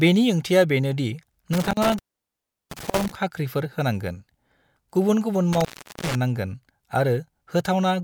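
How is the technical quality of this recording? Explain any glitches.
The speech is marred by two dropouts from an intermittent contact. From 1.53 to 3.15 s, after "बेनि ओंथिआ बेनो दि" and before "खाख्रिफोर होनांगोन", and from 5.53 to 6.15 s, after "गुबुन गुबुन", a loose connection breaks the signal path for about 0.73 s and 0.39 s. The sound drops to faint hiss with crackle at each edge. On a waveform, the signal collapses to a near-flat line bracketed by sharp spikes. A spectrogram shows a blank band with vertical broadband streaks at its boundaries.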